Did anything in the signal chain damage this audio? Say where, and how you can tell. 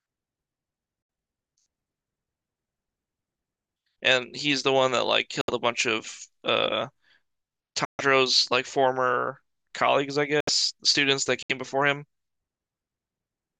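Yes: corrupt frames were muted at the codec decoding stage. Damaged compressed frames were rejected by the decoder and replaced with silence, so the speech drops out abruptly at 1.02 to 1.09 s, 5.41 to 5.50 s, 7.85 to 8.01 s, 10.40 to 10.49 s and 11.43 to 11.51 s. Most holes last about 70 to 90 ms, which fits three lost frames. The longest, about 160 ms, suggests six. Timing stays intact around each gap.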